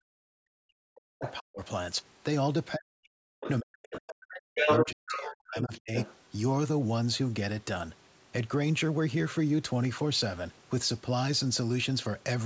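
A speech clip with three kinds of fault. A faint computer activity noise runs throughout. It is a buzzing tick pulsing at roughly 500 Hz, sitting far below the speech. It tracks the machine's workload rather than the talker. Processor or peripheral load is shifting the ground shared with the audio circuit, and that current leaks into the signal. It never stops, so it is easiest to hear in the pauses.

The talker's speech is suppressed in double talk at three points: 0.00 to 1.61 s, 2.76 to 3.27 s and 3.60 to 5.93 s. In these stretches the voice sinks deeply, sometimes almost to nothing. The likely cause is both sides speaking at once. The echo canceller could not tell the local voice from the loudspeaker echo, so it pulled everything down.

The other side's voice leaks through at 1.21 to 1.33 s, 3.40 to 3.51 s, 3.92 to 4.00 s, 4.34 to 5.28 s and 5.61 to 6.16 s. Most of these are brief scraps, well below the talker. 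From 4.34 to 5.28 s the second voice is slightly louder than the talker. The likely cause is the far end playing through a loudspeaker. The echo canceller left part of that sound in the microphone signal.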